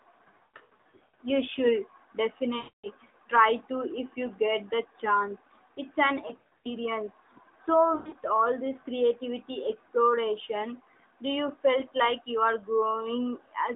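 Lost AMR speech frames break up this narrowband mobile speech at 0.38–1.19 s, 2.58–2.87 s, 6.28–6.71 s, and 7.96–8.18 s, just before "all this creativity exploration". Failed frames force the decoder to repeat old settings at falling gain, so the sound warbles, smears and fades out.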